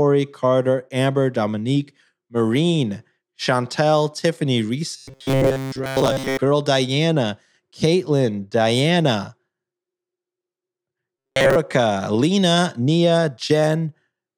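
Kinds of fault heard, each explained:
Robotic sound from repeated short buffers: twice, from 4.97 to 6.41 s and from 11.18 to 11.56 s, the speech becomes a rigid metallic buzz at a fixed 134 Hz that roughly tracks the syllables. The likely cause is audio arriving too slowly, so a fragment of about 7.5 ms is looped to fill the gaps. During these stretches most of the signal, around 70 percent, is repeated material rather than new audio.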